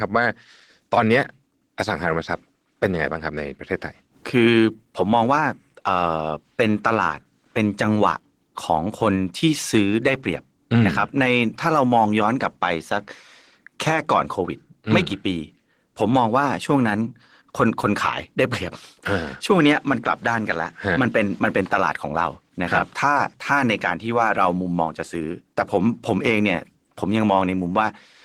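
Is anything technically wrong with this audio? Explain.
Yes. Opus voice compression runs throughout the speech. The encoder works in hybrid mode, with SILK linear prediction coding the lower band and a CELT layer covering content above 8 kHz, so the full band is kept. The bit budget, which points to roughly 16 kbps, forces a coarse coding of the excitation signal, and the resulting codec damage is plainly audible across the whole clip as a hoarse, somewhat robotic quality.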